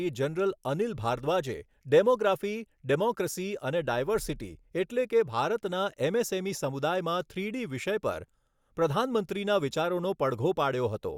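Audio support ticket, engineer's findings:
Speech clip checked by ear, no audible fault found. No component flagged for follow-up.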